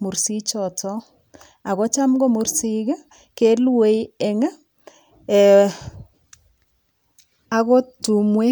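No technical faults are audible.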